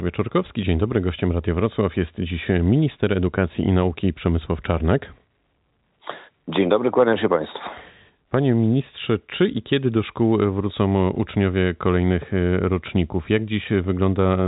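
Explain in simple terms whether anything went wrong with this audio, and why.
Nothing went wrong: the speech carries the narrow sound of an ordinary landline call, with nothing above about 3.8 kHz because G.711 telephone coding is working exactly as a phone line should, and no problems can be heard anywhere in it.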